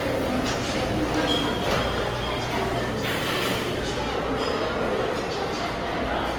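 Across the whole recording the sound is swirly, hollow and smeared, with blurred attacks, likely generation loss from around seven passes through an Opus-like codec near 48 kbit/s.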